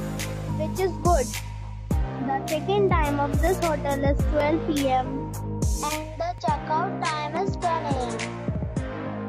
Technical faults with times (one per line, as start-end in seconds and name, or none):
6.38-9.29 input switched to a poorer device